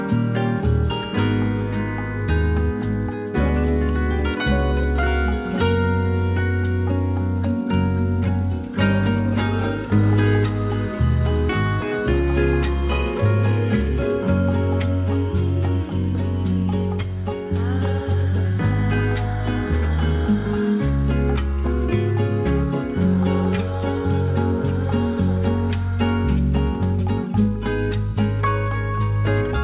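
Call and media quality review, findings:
No call or media quality findings to report for this clip.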